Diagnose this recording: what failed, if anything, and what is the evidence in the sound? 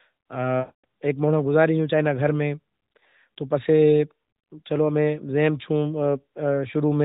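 Lost AMR speech frames, a network-stage failure handled by the decoder's concealment. From 0.60 to 0.85 s, about 240 ms, which fits roughly a dozen consecutive 20 ms frames failing their radio checksum. The decoder repeats the last good pitch and vocal-tract settings while lowering the gain. The sound smears into a held tone that dies away to silence, and speech resumes weak or rough. On a spectrogram, frozen harmonics inside the narrowband image, with nothing above 4 kHz, fade to an empty gap. The waveform shows a decaying periodic envelope reaching flat silence before the restart.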